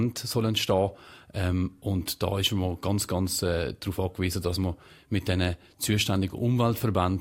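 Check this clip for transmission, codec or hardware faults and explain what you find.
Checking this clip turns up no faults to explain.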